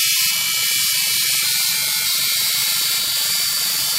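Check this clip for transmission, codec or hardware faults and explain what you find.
One fault is present: buffer tearing from 2.76 s to the end. The writer and reader of the ring buffer cross every 20 ms, splicing in a small slice of audio roughly 70 ms stale. This creates a steady 50 Hz robotic buzz, visible as vertical stripes every 20 ms on a spectrogram and as hard jumps in the waveform.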